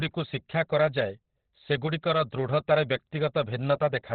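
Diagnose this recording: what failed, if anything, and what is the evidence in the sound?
The codec stage is where this went wrong, and it sounds like heavy Opus compression from start to finish. The speech is muffled and hoarse, with nothing above about 4.5 kHz, so the top end is simply gone. That narrowband, throaty character fits Opus dropping into its SILK speech mode at a very low rate, likely somewhere around 12 kbps. At that rate the encoder sheds bandwidth first and models the voice coarsely.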